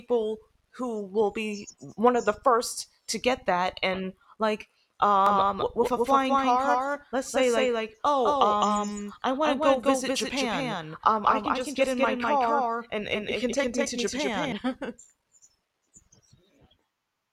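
A speech recording with a doubled audio track from 5.26 s to 14.52 s: a second, equally loud, full-band copy trails about a fifth of a second behind, likely from a second capture path or misaligned edit. It starts and stops abruptly, with no decay or room colour. On a spectrogram every syllable pattern appears twice, offset horizontally, and the waveform shows overlapping duplicate bursts.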